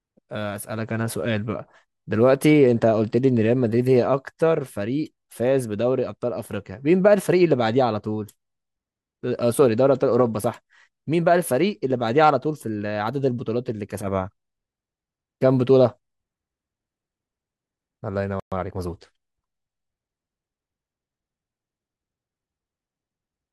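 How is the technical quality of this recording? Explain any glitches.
Two linked glitches interrupt the speech just after 18 seconds: a brief dropout followed by a short rushed passage.

Playback stall, 18.40 to 18.52 s: the speech cuts to silence for 120 ms mid-flow, likely because the player ran short of buffered data or its thread was blocked.

Time-compressed catch-up, 18.52 to 19.00 s: the player trims small slices and cross-fades them to recover the backlog, so the speech runs about 1.25 times faster at unchanged pitch.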